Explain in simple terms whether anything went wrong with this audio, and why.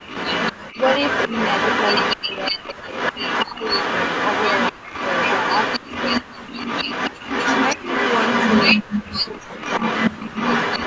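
Echo leak runs through the whole clip, from 0.07 s to the end: a second copy of the voice trails about a quarter of a second (244 ms) behind and sounds nearly as loud as the original. The likely cause is a call on a loudspeaker whose echo canceller failed to scrub what the microphone picked up from that speaker, so the leftover was sent back down the line.

Speech suppressed in double talk shows up as the voice dipping or dropping away at 0.74–1.31 s, 2.16–3.64 s, 4.72–4.80 s, 5.79–6.55 s, 7.76–7.87 s and 8.76–10.35 s. The dips at 0.74 s and 7.76 s are mild. The others nearly silence the voice in patches. This likely happened because both sides spoke at once and the echo canceller, unable to separate the talker from the loudspeaker echo, turned everything down.

Background gated by the echo canceller appears at 8.78–8.88 s, where the room sound drops out almost completely for a tenth of a second and then returns. 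While the loudspeaker was playing, the canceller clamped the microphone down hard, taking the surrounding ambience with it until it let go.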